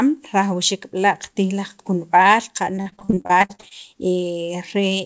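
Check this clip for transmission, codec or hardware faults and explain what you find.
There's one fault here: repeated packet loss between 2.76 and 3.73 s. The speech turns choppy as sixteen short dropouts, the longest about 41 ms, get patched by stretching the preceding sound, so roughly 40% of that stretch is filled-in guesswork. Nothing reaches above 8 kHz, which fits a G.722 call path.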